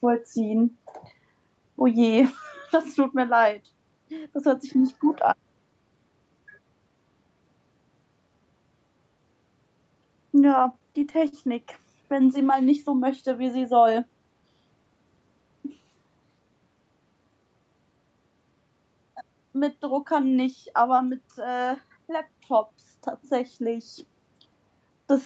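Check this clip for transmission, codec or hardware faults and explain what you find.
Two transmission faults stand out in the speech, both from the jitter buffer of a call link, with the sound capped around 8 kHz.

Repeated stalls (stutter), 10.63 to 12.06 s: late packets left the jitter buffer empty 13 times, each gap bridged by stretching the last sound (longest 42 ms), so the speech drags and stutters.

Jitter buffer speed-up, 21.76 to 21.98 s: excess buffered audio was trimmed by removing about 40 ms of pitch periods, so the speech briefly runs at 116% speed and sounds hurried.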